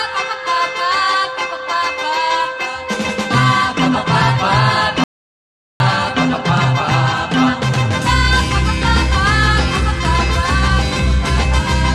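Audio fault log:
5.04–5.80 s, audio dropout to silence: the sound cuts off abruptly into total silence for about 760 ms, no room tone, likely a lost input link.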